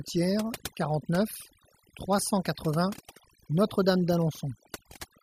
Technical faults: overdone noise removal; dropped samples

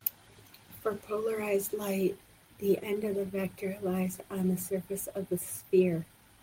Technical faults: none

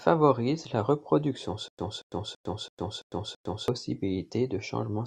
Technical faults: stutter with silent gaps

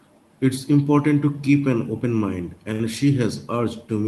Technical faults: short stall from a late packet

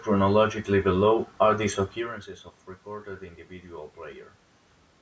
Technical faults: none

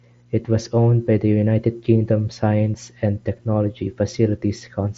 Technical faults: none

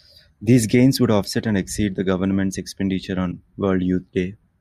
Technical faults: damaged data in a compressed stream

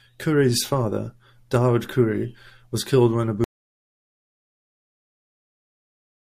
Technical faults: audio dropout to silence

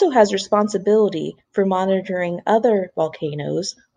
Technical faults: none

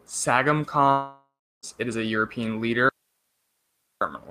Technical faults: long network dropout; audio dropout to a faint residue

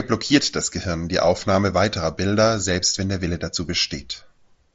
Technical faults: none

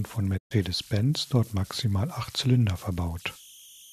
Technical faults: converter idle tones; digital broadcast dropout

